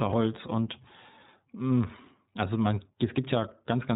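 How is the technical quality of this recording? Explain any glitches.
The quality is limited by a codec the whole way through: the speech comes across as narrowband phone audio with a plainly audible coded texture.

iLBC codec damage runs throughout. Everything above 4 kHz is gone, so the voice sounds muffled. Each frame's excitation is coded independently, which gives a slightly rough, synthetic buzz. The sound fits the 13.33 kbps mode with 30 ms frames.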